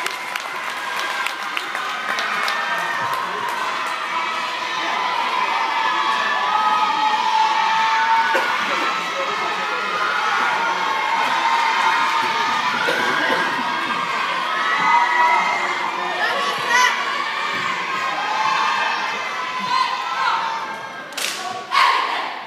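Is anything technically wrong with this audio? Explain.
No, nothing in this audio indicates a technical fault.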